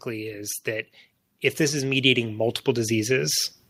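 From 0.05 to 0.95 s, then 1.57 to 3.54 s, automatic gain rising lifts the level by about 4 dB, then about 9 dB. Voice and background swell together.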